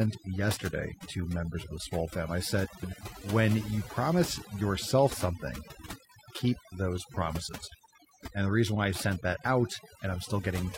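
A noise reduction stage set far too aggressively runs through the whole of this speech recording. Overdone noise removal pulls individual frequency bands down or out whenever they sit near its noise estimate. The background sinks to near silence dotted with twinkling specks. Between 2.64 and 3.03 s, frames out of order occur. Two adjacent runs of frames, each about 0.19 s long, which fits roughly four frames apiece, were decoded in swapped sequence. That stretch plays back with its halves exchanged, giving a garbled flutter, though no time goes missing.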